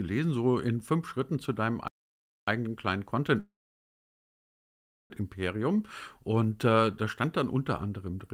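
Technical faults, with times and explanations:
1.88–2.48 s, playback stall: the speech just cuts out for about 0.6 s mid-flow and then picks up right where it left off. Most likely the player ran dry of data or its thread got blocked, so the output sat silent until it caught up.
3.39–5.12 s, call audio freeze: the last bit of sound hangs on briefly as a fading buzz or hiss, then goes quiet for roughly 1.6 s before the speech resumes. Likely packets were held up and the jitter buffer emptied. Nothing's lost, but everything after now runs about 1.7 s late.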